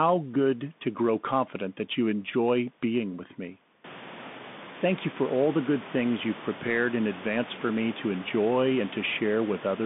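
The speech passes through a Bluetooth CVSD headset codec from start to finish. It is coded as a single bit per sample, with an adaptive step tracking the waveform up or down, at a rate that fits a 64 kbps link. The band is held between 150 Hz and 3.6 kHz, leaving the speech thin and muffled. Loud peaks outrun the step and distort, s sounds turn scratchy, and a granular hiss sits under everything. Around 4 s the room noise rises by about 21 dB, staying about 18 dB below the speech.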